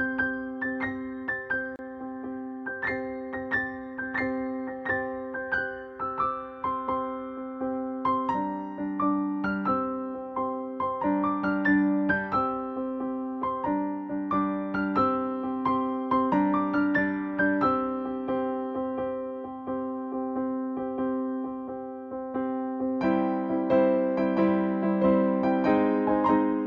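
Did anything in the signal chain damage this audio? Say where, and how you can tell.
Yes. At 1.76 s the sound drops out for about 30 ms, to 1.79 s, then resumes exactly where it stopped, with nothing lost or repeated. The edges of the silence are smeared by the codec. This is a gap at a join of encoded pieces, introduced at the codec stage: the audio was encoded in separate segments, and the start-up delay and final-frame padding each encoder run adds were left in when they were spliced together.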